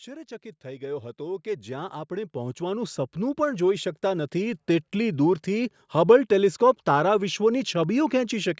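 From 0.05 s to 4.65 s the speech shows automatic gain rising: the gain control judged the input too quiet and kept turning it up, by about 17 dB in total. Voice and background noise swell together over those four and a half seconds instead of holding steady. On the waveform the envelope widens as a slow ramp, and on the spectrogram everything brightens evenly below the 8 kHz ceiling left by the call's microphone processing.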